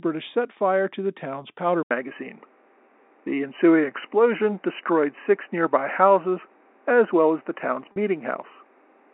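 Input switched to a poorer device at 1.83 s, likely: after "to the town's powder" an 80 ms silence falls, then the speech continues duller, cut above 3 kHz, about 5 dB different in level, with new noise roughly 35 dB down. Packet loss with pitch repetition at 7.92 to 7.96 s: about 40 ms went missing and was bridged by repeating the last pitch period, giving a brief held, buzzy sound before the speech returns.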